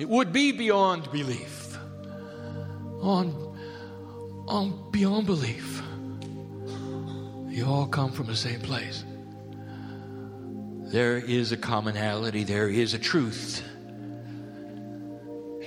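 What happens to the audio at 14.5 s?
Nothing goes wrong at 14.5 s, and the audio plays through that moment intact.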